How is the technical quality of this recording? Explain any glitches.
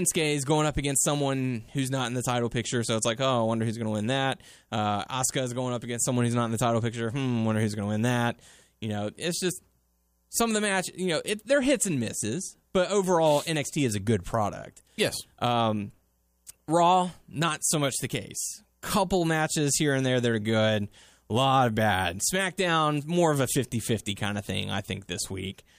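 No glitches or technical faults can be heard here.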